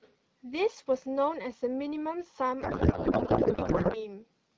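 From 2.61 to 4.07 s the speech turns into garbled noise and warble that barely tracks it. This is a codec payload misread: octet-aligned AMR frames decoded as bandwidth-efficient, shifting every field. Unlike packet loss, there are no gaps or concealment fades, only continuous scrambled output. Before and after, the AMR-WB speech sounds clear, consistent with around 12.65 kbit/s.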